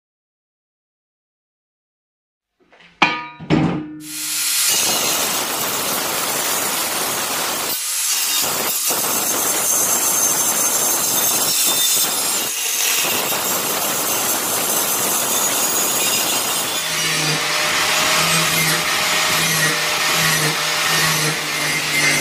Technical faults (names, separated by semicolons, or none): bit error spike